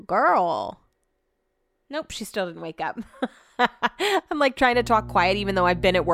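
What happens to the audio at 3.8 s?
Nothing goes wrong at 3.8 s; the speech runs through that moment intact, with no fault to be heard.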